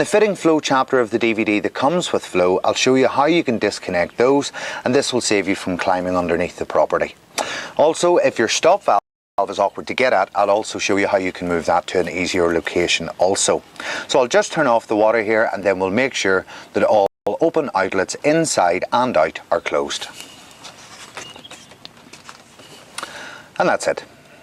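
At 8.99 s the sound cuts out mid-flow and stays silent for about 0.39 s, until 9.38 s, then picks up again. A second, shorter gap of about 0.2 s runs from 17.06 s to 17.27 s. Both are playback stalls: the player was likely starved of data or had its output thread held up, so nothing reached the output until it recovered.

Right after each gap the audio sounds hurried but keeps its normal pitch. From 9.38 s to 12.00 s it runs about 1.15 times normal speed, and from 17.27 s to 19.29 s about 1.1 times. This is time-compressed catch-up. To clear the backlog built up during the stall, the player drops small slices of audio and cross-fades the joins.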